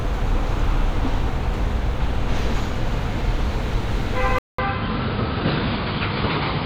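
Sounds, with the input likely switched to a poorer device at 4.39 s: after a 200 ms gap, nothing above 5 kHz remains, the level drops about 5 dB and faint new background noise appears.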